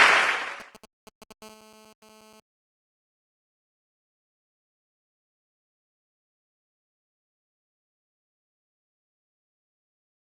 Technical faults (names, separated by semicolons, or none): GSM signalling bursts; GSM phone buzz; corrupt frame muted